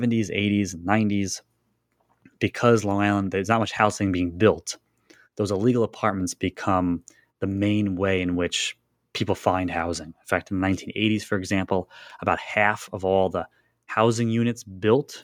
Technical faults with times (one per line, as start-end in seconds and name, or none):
none